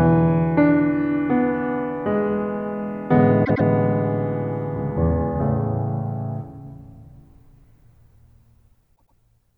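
At 3.44 s and again at 8.95 s, the music stutters from repeated frames. A 104.5 ms block, likely four compressed frames, plays twice more, adding 209 ms each time.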